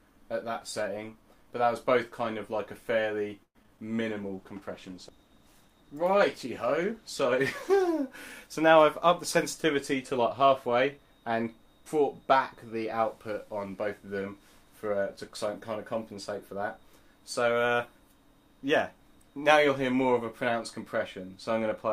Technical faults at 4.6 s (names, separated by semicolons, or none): call bitrate drop